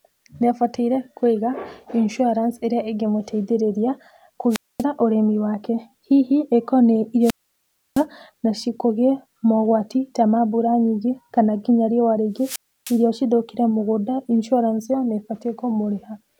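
Wireless microphone squelch dropout hits this speech three times: 4.50 to 4.84 s, after "kũiga insuarance ĩrĩa ĩngĩmũteithĩrĩria" and before "ũrĩmi wake"; 7.21 to 8.05 s, before "nacio kũgĩe mogwati ta"; and 12.36 to 13.05 s, between "nyingĩ kana nginya riũa" and "cithũkĩre mũgũnda". Each time the FM radio link weakens, hiss swells, then the receiver's squelch shuts the output, leaving holes of near silence lasting 0.24, 0.66 and 0.31 s before the signal returns.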